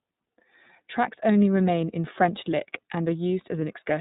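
From start to finish the speech passes through the iLBC codec, a narrowband VoIP coder that codes each frame's excitation independently of the previous one. The result sounds clear but plainly rough and synthetic. Its texture fits the 30 ms frame mode at about 13.33 kbps. On a spectrogram, energy stops at a flat ceiling at 4 kHz, leaving the band above empty.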